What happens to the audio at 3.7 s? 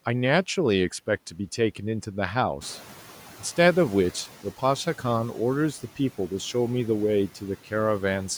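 At 3.7 s the background noise is still louder and more exposed than it should be, then gradually sinks away by 4.23 s. This is the noise suppressor catching up, running from 2.61 s to 4.23 s. The room noise jumped by about 13 dB at roughly 2.5 s, and the suppressor's noise estimate lagged behind that jump. It took about 1.6 s to adapt. Until the estimate caught up, the new, louder noise passed through with less reduction, settling only as the cut came back to about 7 dB.

Under that same moment sits a steadier problem: the residual noise dips between words and swells beneath them. These are noise suppressor artifacts, present across the whole clip. The suppressor lowers each frequency band it judges to be steady noise, frame by frame, here by about 6 dB. Because those per-band decisions keep shifting, the leftover noise rises and falls with the speech.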